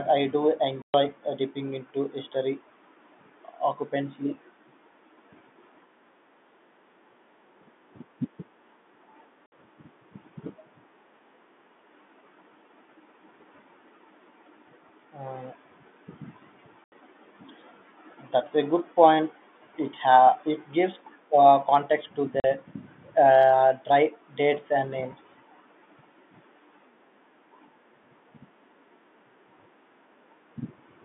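Packet loss filled with silence breaks up this telephone-band speech recording: lost packets were replaced by dead air, leaving hard-edged holes at 0.82 s (120 ms, between "I do" and "uh dipping into history"), 9.46 s (60 ms), 16.84 s (80 ms) and 22.4 s (40 ms), all multiples that fit 20 ms packets.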